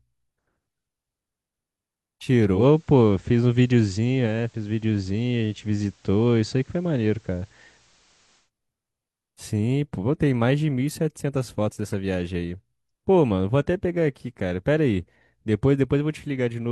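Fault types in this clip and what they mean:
Digital radio blending to analogue: from 2.53 s to 8.50 s the receiver drops the digital stream and cross-fades, over about 147 ms, to the station's FM broadcast, then returns. During that stretch a faint hiss floor appears, around 40 dB below the speech. On a spectrogram a haze fills the silences. On the waveform the envelope shifts by about 2 dB.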